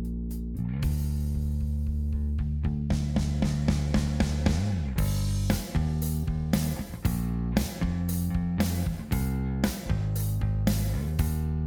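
Nothing is technically wrong with this clip.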